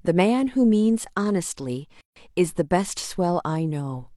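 This is a speech clip with one gap at a join of encoded pieces. From 2.01 to 2.16 s the sound drops into silence for about 151 ms. Its edges are smeared by the codec, so the truly silent part is shorter. Afterward the speech resumes exactly where it stopped. This points to separately encoded pieces joined without trimming. The start-up delay of one piece and the padded last frame of the other both stay in as dead air.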